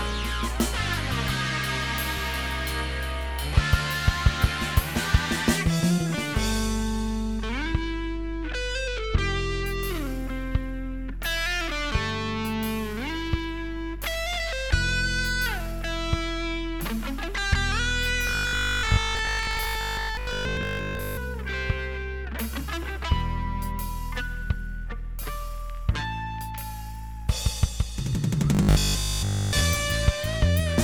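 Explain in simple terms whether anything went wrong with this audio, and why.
Robotic sound from repeated short buffers appears from 18.27 to 21.19 s and again from 28.55 to 29.65 s. The sound becomes a stiff, metallic 50 Hz buzz, likely because audio arrived too late and the player looped about 20 ms pieces, replacing most of the real audio.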